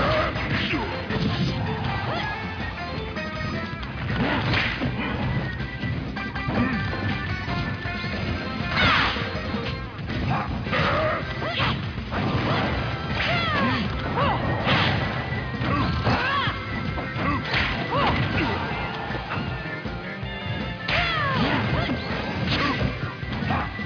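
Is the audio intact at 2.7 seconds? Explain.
Yes, the audio is intact at 2.7 seconds, with no dropout, click, distortion or other fault audible there.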